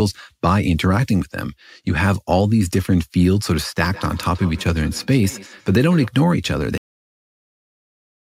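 From 3.84 s to 6.13 s the speech picks up a feedback echo between two devices: a second device in the room is replaying this microphone's signal, and the microphone captures it again, which its own echo canceller cannot remove. Each syllable returns at a fixed interval of around 150 ms, thin and ringing, at most about 20 dB below the speech. A spectrogram shows faint, delayed copies of each syllable's harmonics trailing it at regular spacing.

At 6.78 s the audio has a cut-off end: the final buffers were never written or played, so the speech stops mid-sound and drops straight to digital silence for the rest of the clip. There is no natural decay or room tail. On a waveform the signal ends abruptly mid-sound and becomes a flat line. On a spectrogram the energy stops with a sharp vertical edge across all frequencies.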